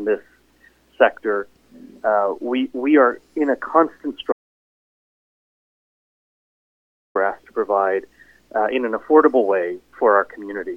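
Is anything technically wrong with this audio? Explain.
Yes. From 4.32 to 7.15 s there's an audio dropout to silence: about 2.8 s of dead silence, no room tone. The input likely dropped out while recording continued.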